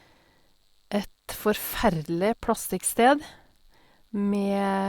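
No technical faults can be heard anywhere in the speech.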